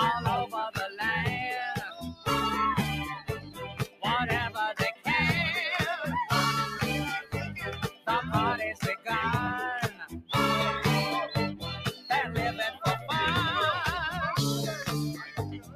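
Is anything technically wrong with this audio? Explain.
Yes. Throughout, the level keeps lifting and sinking, with a swing of around 10 dB, so sustained parts and tails thin out while attacks pass. This is a noise suppressor applied to music or sounds: a speech-oriented suppressor treats steady content and ambience as noise and pulls it down.

At 1.8 to 2.27, 3.16 to 4.05, 7.72 to 8.08, 8.73 to 9.08, 9.88 to 10.3, 11.88 to 12.08, and 15.14 to the end, the sound dips by about 10 to 17 dB at its deepest. This is sound cut by the noise suppressor, which took these passages for noise and attenuated them harder than their surroundings.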